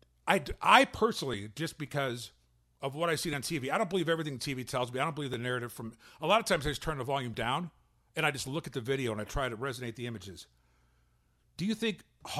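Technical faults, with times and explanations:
1.34 s to 11.33 s, periodic USB or driver dropouts: starting just after "I I", the speech is broken by regular ticks about every 2.0 s, roughly seven in all. Each time, a few milliseconds of audio are skipped outright rather than replaced by silence, so the waveform jumps and clicks. The strict spacing points to a background task repeatedly stalling the USB bus or audio driver. The ticks are heard only where there is signal.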